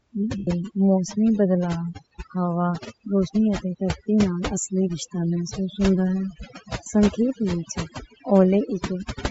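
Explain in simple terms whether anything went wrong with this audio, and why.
A noise reduction tool was set far too strong, which is overdone noise removal. Whenever parts of the sound came close to what it took for background hiss, it cut them away. The gaps between phrases drop to near silence with twinkling specks.

The speech also has a breathy, grainy edge, and its upper range is smeared and filled in with hiss. That is most likely Bluetooth LC3 compression, where the wireless link squeezed the audio hard to save data and threw away fine detail.

Some packets on the Bluetooth link never arrived, which is lost LE Audio frames. The receiver patched each gap by repeating and scrambling the last good sound. From 0.38 to 0.48 s, just before "موسمی بدلاؤ ہوا روشنی", the speech turns into a fading, noisy smear. The same thing happens more briefly at 6.84 to 6.86 s, just before "سنکھیپ وچ".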